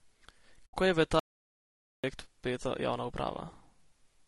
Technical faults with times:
0.00-4.28 low-delay AAC compression
0.65-0.74 AAC frame loss with muting
1.19-2.04 audio dropout to silence

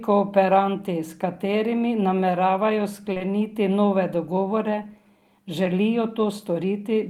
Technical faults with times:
3.13-3.22 short concealed packet loss

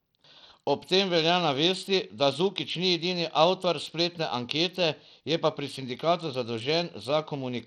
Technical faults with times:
0.00-7.66 Bluetooth SBC compression

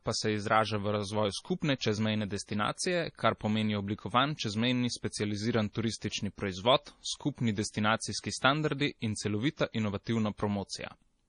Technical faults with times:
0.00-11.28 MP3 compression

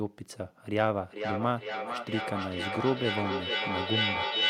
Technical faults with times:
1.02-4.50 feedback echo between two devices

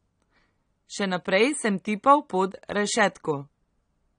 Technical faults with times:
0.00-4.18 AAC compression

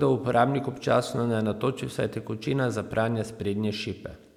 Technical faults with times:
none

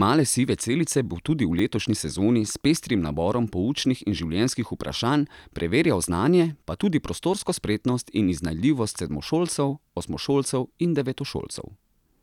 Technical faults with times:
1.59 repeated buffer
9.26 repeated buffer

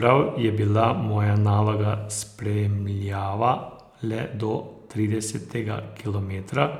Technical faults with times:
none

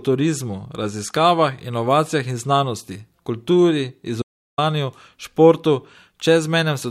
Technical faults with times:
4.22-4.58 audio dropout to silence

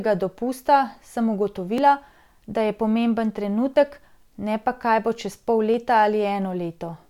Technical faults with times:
1.78 audio missing between chunks
3.76 audio missing between chunks
5.74 audio missing between chunks

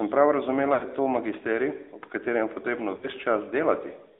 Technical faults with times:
0.00-4.20 AMR narrowband mobile codec
0.74-0.85 lost AMR speech frames
2.96-3.08 lost AMR speech frames

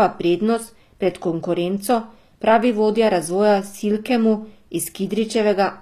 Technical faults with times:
0.00-5.81 HE-AAC compression

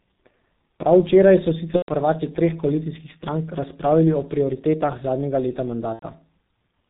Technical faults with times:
0.00-6.90 G.723.1 codec
1.76-1.92 VoIP packet loss concealed by the speech codec
5.93-6.03 VoIP packet loss concealed by the speech codec

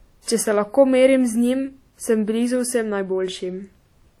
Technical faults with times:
0.00-4.20 WMA compression

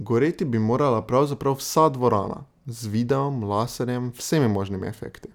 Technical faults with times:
none

